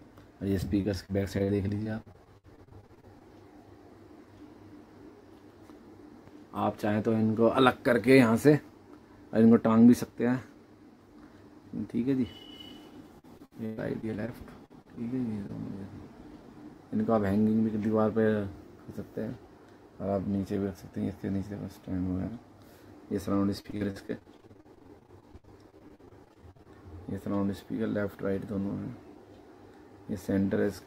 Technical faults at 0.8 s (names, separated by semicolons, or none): repeated packet loss (robotic sound)